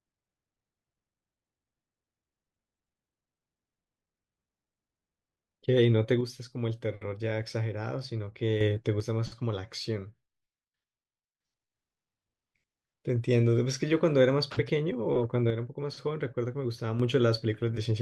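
At 6.21 to 8.61 s, 9.00 to 11.40 s and 15.50 to 17.00 s the speech abruptly drops by about 6 dB and then snaps back to full level. This is most likely one channel drops out, with the mono sum losing half its amplitude while one stereo channel is missing. On the waveform, each span shows a sudden step down in envelope height. On a spectrogram, the whole band dims evenly, with sharp vertical edges at each boundary.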